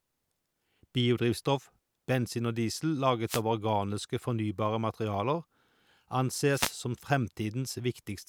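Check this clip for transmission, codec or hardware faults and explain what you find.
Two short wireless microphone noise hits occur in this speech, from 3.26 to 3.42 s and from 6.51 to 6.74 s, lasting about 0.16 and 0.23 s. The analogue FM radio link briefly fades when reflected signal paths cancel at the receiver. Receiver noise then surges and, in a deep fade, breaks into clicks that cover the voice. Each is heard as a brief swish of static. Unlike a digital dropout, which leaves a silent gap or a repeated fragment, this fault adds noise over the signal.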